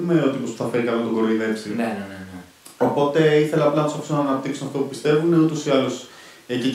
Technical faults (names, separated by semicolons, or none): none